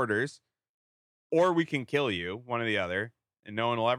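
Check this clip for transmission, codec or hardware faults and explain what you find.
No faults detected.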